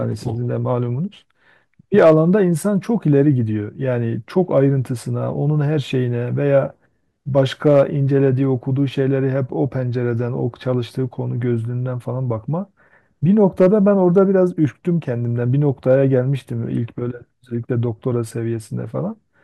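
Hard clipping breaks into this speech four times, each where a peak pushed the level past what a stage in the chain could pass, so the waveform tops were sliced flat. The first run, 1.98 to 2.14 s, is overdriven by about 4 dB and gives a short, gritty crackle. From 7.38 to 7.81 s the overload is smaller, about 2 dB, but lasts longer, roughening the peaks throughout. Two brief bursts follow, 13.61 to 13.67 s at about 3 dB and 14.17 to 14.22 s at about 1 dB. The flattened tops add upper harmonics heard as a crisp edge on the loudest moments.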